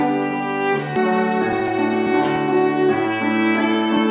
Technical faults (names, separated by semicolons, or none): skip ahead; jitter buffer speed-up